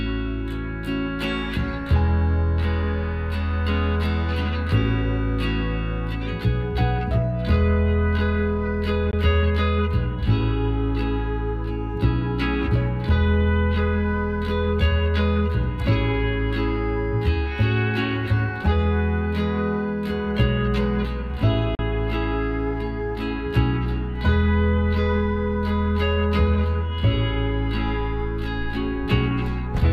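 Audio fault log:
9.11–9.13 s and 21.75–21.79 s, Bluetooth dropout: the sound drops to silence for 19 ms, then 37 ms, and resumes as though it had played on. This is likely from late wireless packets, fitting one and then two lost. Waveform shows flat gaps; spectrogram shows thin, empty full-band columns.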